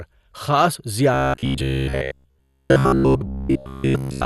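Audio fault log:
throughout MP2 compression: the speech sounds dull, with a plainly audible gurgling, granular grain. This is likely MPEG Layer II coding at a rate that fits 64 kbps, too few bits to keep the upper sub-bands, which drop out while the rest are coarsely quantised.
1.14 to 4.25 s robotic sound from repeated short buffers: from 1.14 s to the end, the speech turns into a rigid metallic buzz locked at 66.8 Hz. This likely comes from audio arriving too seldom, so a cycle of about 15 ms keeps being replayed. Roughly two-thirds or more of the real sound is lost.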